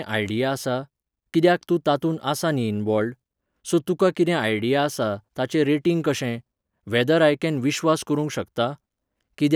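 Nothing in this recording trips any alarm, with no faults to point to at any moment along the way.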